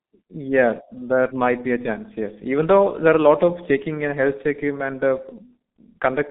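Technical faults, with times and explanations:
Throughout, G.723.1 codec. The speech passes through a narrow telephone band of about 150 Hz to 3.7 kHz, and nothing survives above 3.8 kHz. Heavy coding damage at a rate near 6.3 kbit/s leaves it muffled and hoarse. Slow 30 ms frame updates smear the consonants.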